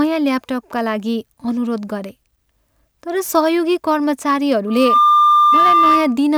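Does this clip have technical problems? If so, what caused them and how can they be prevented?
Yes. Loudspeaker feedback squeal from 4.67 to 6.18 s: a 1.2 kHz tone swells within roughly a third of a second, ending up a few dB above the speech. Lower the gain or move the mic away from the speaker.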